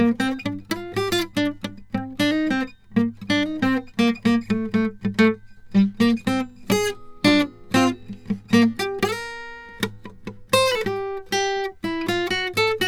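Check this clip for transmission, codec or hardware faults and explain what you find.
No faults can be heard anywhere in this music.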